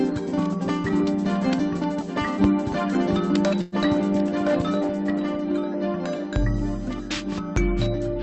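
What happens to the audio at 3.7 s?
From 3.61 to 3.75 s the sound stalls into a brief buzzy, fading continuation of itself, then resumes where it stopped. This is a call audio freeze, likely from delayed packets draining the jitter buffer; about 108 ms was filled in, nothing lost, and everything after runs that much later.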